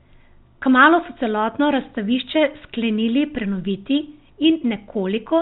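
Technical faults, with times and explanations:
No technical faults are heard in this speech, so there are no times or explanations to give.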